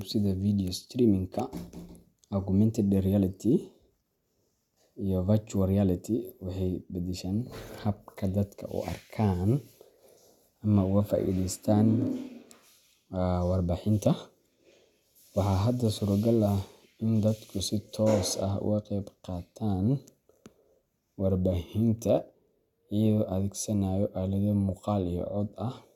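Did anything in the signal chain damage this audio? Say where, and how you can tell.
No, nothing along the signal chain has audibly damaged this speech recording, and the signal holds steady and continuous throughout.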